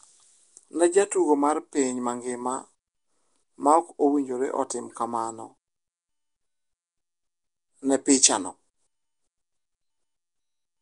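From start to finish the speech carries a plainly audible rough, hissy halo and a smeared, underwater quality, with nothing above 10.7 kHz. The likely cause is Nellymoser compression, which fills bands it cannot afford with noise, and the damage fits about 44 kbps.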